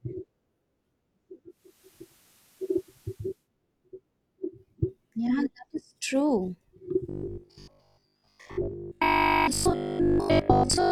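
From 1.48 to 3.49 s the receiver lost its digital stream and made a digital radio blend to analogue, cross-fading over about 0.41 s to the station's FM broadcast and later back. On the FM side, the level shifts by about 3 dB, and a hiss sits roughly 35 dB below the sound, so a grainy floor appears until the digital signal returns.

Just after "is true", from 7.09 to 10.91 s, new audio likely arrived too seldom, and the software filled each gap by replaying the last short buffer, which fits a 20 ms buffer. Most of the real audio in that stretch is skipped rather than played. The constant looping imposes a fixed 50 Hz buzz, so the speech turns into a rigid, metallic, robotic buzz that only loosely tracks the rise and fall of the original delivery.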